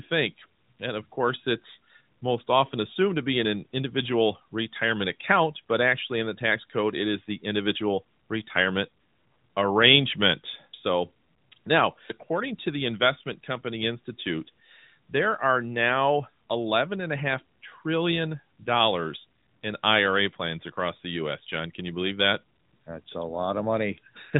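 There are no technical faults to describe at any point in this speech clip.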